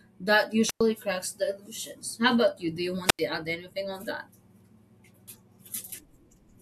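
Wireless microphone squelch dropouts occur at 0.65 to 0.81 s and 3.04 to 3.20 s. The analogue FM radio link fades, hiss swells, then the receiver's squelch mutes the speech for about 100 ms and 90 ms respectively before the signal recovers.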